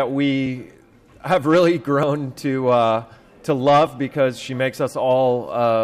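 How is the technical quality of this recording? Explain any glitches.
Two brief glitches break the continuity of the recording, at 2.03 s and 3.87 s. Each is a small jump in the sound, likely a dropped buffer (overrun): the software failed to read the audio before the hardware overwrote it, so roughly 10 ms vanished and the surrounding audio was spliced together without a gap. On a waveform, each shows as an abrupt discontinuity. On a spectrogram, each shows as a thin vertical broadband line.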